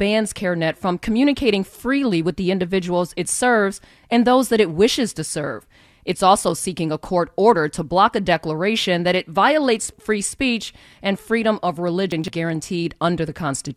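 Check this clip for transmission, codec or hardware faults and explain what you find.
One transmission fault: chunks out of order at 12.12–12.28 s, where a 40 ms chunk plays three chunks late, jumbling the speech across three hard joins. Unlike a dropout, no sound is lost.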